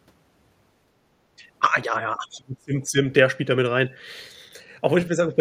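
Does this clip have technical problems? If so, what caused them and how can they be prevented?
Yes. Speech suppressed in double talk, from 1.86 to 2.97 s and again from 5.09 to 5.20 s: the speech sinks sharply in the first stretch, by around 30 dB at its deepest, and dips only slightly in the second. The likely cause is an echo canceller that heard both ends talking at once, could not tell this talker from loudspeaker echo, and attenuated everything. A double-talk detector tuned to keep near-end speech, with headset use, prevents it.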